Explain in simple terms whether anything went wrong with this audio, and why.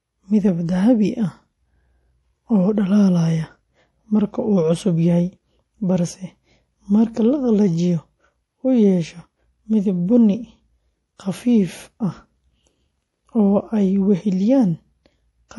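MP3 compression, throughout: the speech sounds watery and dull, with nothing above 11.5 kHz, likely from an encoder short of bits discarding treble and faint detail.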